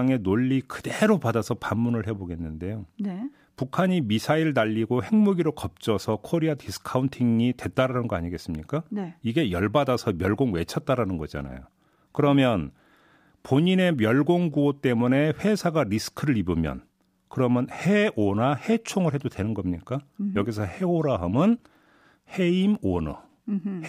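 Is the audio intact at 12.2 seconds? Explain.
No. At about 12.17 s the speech has chunks out of order. A block about 5.8 ms long plays after the one that should follow it, which points to a single late buffer. Nothing is lost, but the swapped order creates hard joins, heard as a brief jumbled moment.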